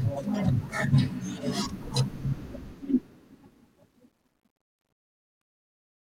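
From 2.42 s the speech fade-out shows truncation distortion, consistent with an undithered 11-bit stage. It turns gritty from 3.5 s, with stair-stepped waveform and broadband spectrogram specks.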